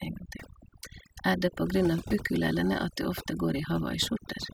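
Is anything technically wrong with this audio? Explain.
Yes. Throughout the speech there is overdone noise removal: an aggressive reducer pulls any band near its noise estimate down to nothing, taking quiet speech detail with it. The voice sits over near-silent, twinkling gaps; a spectrogram shows scattered isolated specks and ragged, holed harmonics.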